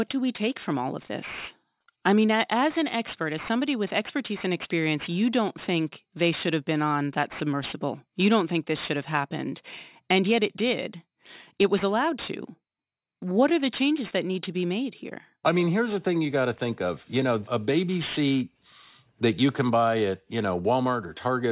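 Aliasing runs through the whole clip. The speech was downsampled without an anti-alias filter, which fits a drop to 8 kHz. Energy above 4 kHz folds back below it. Sibilants turn gritty and metallic. The folded energy sits roughly 20 dB under the speech.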